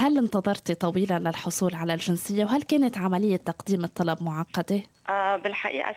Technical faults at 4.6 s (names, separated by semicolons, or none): none